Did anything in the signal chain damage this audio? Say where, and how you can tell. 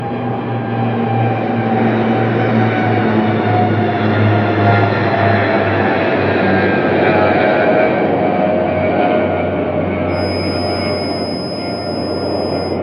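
Yes. From 10.06 s to the end, a thin, steady whistle at 5.1 kHz sits about 15 dB below the sound, slowly swelling and fading in level. This is a feedback whistle, likely from a loudspeaker-to-microphone loop in the analogue path held just short of runaway.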